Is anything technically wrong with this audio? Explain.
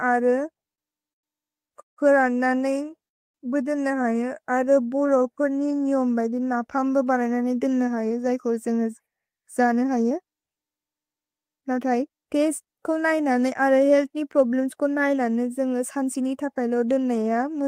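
Yes. The speech drags, stops and rushes in turn, which points to packet delivery problems in a call.

From 0.53 to 2.74 s the speech catches and hitches ten times, with a stretched, smeared sound at each catch, the longest about 171 ms. These are repeated stalls (stutter). Packets arrived late, so the jitter buffer kept running dry, and the receiver extended the last sound until data came in. About 381 ms was filled this way, roughly 17% of that stretch, and nothing was lost. A milder burst of three tiny catches, none longer than 12 ms, occurs between 4.65 and 4.78 s.

From 2.77 to 3.05 s, and again from 4.51 to 5.95 s, the speech slows without any drop in pitch. Sounds are drawn out, at 83% and then 88% of normal speed. This is jitter buffer slow-down: to build up a reserve, the receiver repeated single pitch periods over and over, adding about 57 ms and then 173 ms.

From 3.08 to 3.36 s the audio stops dead for about 260 ms of silence and then picks up exactly where it left off. 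This is a call audio freeze. The likely cause is packets held up in transit, leaving the buffer empty. The 261 ms pause was inserted into the stream, and nothing is missing.

From 7.57 to 12.10 s the speech sounds hurried, running at about 110% speed while the pitch stays the same. This is jitter buffer speed-up. The buffer was holding more audio than its target, so the receiver trimmed many short slices, each one or a few pitch periods long. Together these cuts removed about half a second.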